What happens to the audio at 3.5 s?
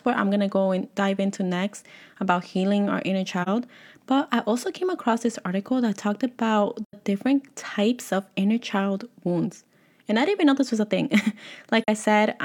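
Between 3.42 and 3.49 s the speech fades out and back in, a brief dip of about 43 ms. This is AAC frame loss with muting: the span fits one lost frame, which the decoder zeroed, and the overlapping windows spread that silence into soft fades.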